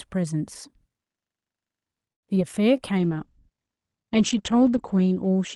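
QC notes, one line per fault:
2.12–2.24 s, call audio freeze: the sound stalls and drops out for about 100 ms, with a short tail of the last sound carried over before it goes quiet. When it resumes it picks up right where it left off, so nothing is lost but everything after sits roughly 105 ms later. That points to packets likely stuck in transit, with the jitter buffer running dry and the receiver padding the wait.
2.35–2.37 s, short concealed packet loss: there's a quick smear or wobble here, about 20 ms of real audio gone, with roughly 10 ms patched in by extending the preceding sound before blending back into the genuine signal. A few hundredths of a second never made it to the decoder in time, and the concealment papers over the hole. Any brief sound landing right there could get swallowed.
2.98 s to the end, call bitrate drop: from here the sound turns coarse and watery, and the top end closes in, with the cutoff falling from 12 kHz to 8 kHz. 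That fits the encoder being pushed from around 64 kbps down to about 13 kbps after the bandwidth estimate fell. It sits at its worst for about 1.9 s and never recovers before the clip ends.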